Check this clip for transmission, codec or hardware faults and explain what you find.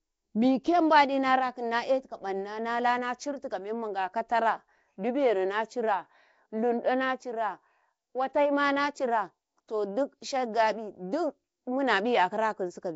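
The speech carries one codec fault from start to finish, most likely Nellymoser compression. There is a rough, hissy halo around the speech and a smeared, underwater character, and nothing is heard above about 7.7 kHz. A Nellymoser Asao encoder at a low rate, around 32 kbps, would explain this. It spends a fixed two bits per sample on short blocks, gives weak bands no bits at all, and fills those bands with noise, which produces the hiss and the smearing.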